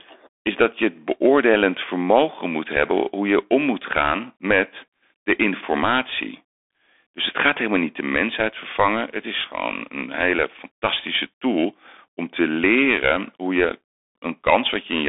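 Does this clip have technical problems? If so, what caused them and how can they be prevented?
Yes. The Bluetooth CVSD headset codec affects the whole clip. Its one-bit up/down coding, consistent with a 64 kbps link, squeezes the speech into 300 Hz to 3.6 kHz, leaving scratchy s sounds over a grainy hiss. A spectrogram shows an empty band above 3.6 kHz. To prevent it, record through a wired microphone or a wideband headset mode.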